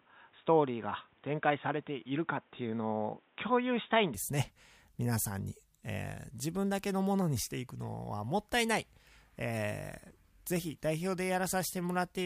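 Input switched to a poorer device, likely, over the opening 0.0 to 4.14 s of this speech: the sound is dull and boxy with nothing above 3.8 kHz and a faint added noise floor, then clears abruptly with no gap and no level jump.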